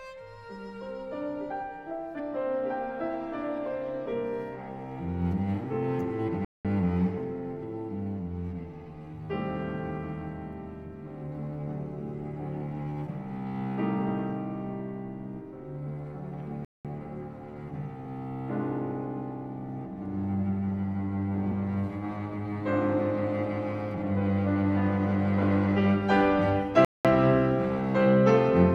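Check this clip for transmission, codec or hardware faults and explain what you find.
Two faults are audible: a skip in the compressed stream and recurring gaps between chunks.

Compressed frames skipped at 2.12 to 2.20 s: missing or rejected frames jump about a tenth of a second ahead.

Gap between chunks at 6.45, 16.65 and 26.85 s: 200 ms silences recur every 10 s where chunks join. Nothing is lost.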